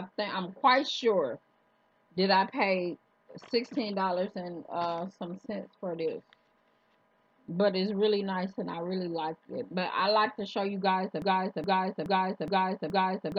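At 11.22 s the audio falls into a broken-record loop: a fragment of about 0.42 s plays again and again, back to back, five times, and the loop runs to the end of the clip. It sounds like a stuck, stuttering cycle with no forward progress. The likely cause is a stalled player, encoder or stream that kept resending its last buffered piece, so the audio meant for that stretch is gone. On a waveform or spectrogram, identical blocks tile at a fixed 0.42 s spacing.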